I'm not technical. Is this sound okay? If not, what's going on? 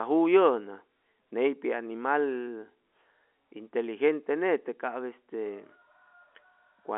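Yes, nothing here is wrong.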